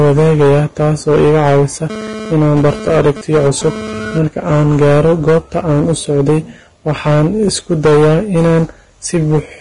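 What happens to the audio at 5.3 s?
At 5.3 s the speech is hit by hard clipping, present throughout the clip: it is driven about 11 dB past the limit, so around a tenth of samples are cut flat, giving fuzz on every loud syllable rather than the occasional crackle of brief overs. On top of that comes heavy hiss and graininess with nothing above 10.6 kHz, likely Vorbis compression near 30 kbps, whose noisy treble and smeared onsets differ from clipping's distortion tied to loud moments.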